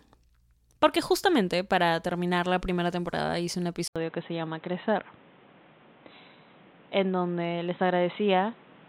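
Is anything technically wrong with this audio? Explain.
Yes. At 3.88 s the speech drops out for about 80 ms. When it returns, the input has likely switched to a poorer device, and it stays that way to the end. The new microphone path passes nothing above 4 kHz, so the speech turns dull and boxy. A new background noise also appears, well below the speech. The loudness hardly changes, so the shift is heard mainly as lost brightness and added noise.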